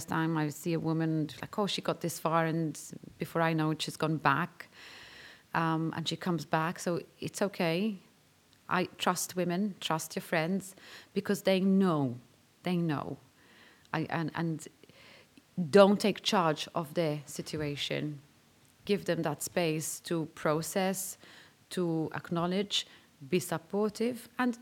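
No technical faults are audible anywhere in the speech.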